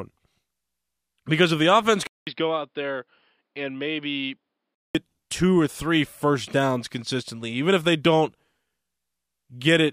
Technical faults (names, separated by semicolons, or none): input switched to a poorer device